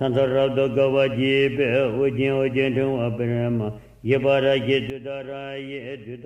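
A gain setting was likely applied without a ramp at 4.90 s, a sudden gain jump: sound and background noise drop together by about 12 dB until the end.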